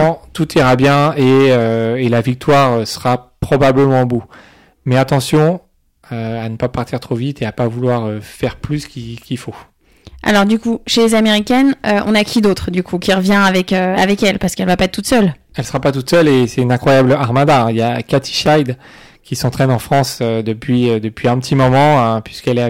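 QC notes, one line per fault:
throughout, hard clipping: The signal drives a stage about 14 dB past its limit, flattening roughly 7 percent of samples, so peaks become a harsh, fuzzy crackle on loud speech.
18.46 s, repeated buffer: Audio arrives late, so one tiny piece, which fits a 5 ms buffer, plays three times with hard joins, heard as a brief click-like buzz.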